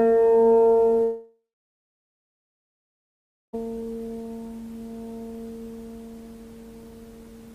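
At 1.03 s the sound gives way to a fading buzz that soon leaves about 2.1 s of near silence. The audio returns at 3.55 s with the intervening 2.5 s simply missing. This is likely a long network dropout. Unlike a brief packet-loss glitch, it outlasts concealment.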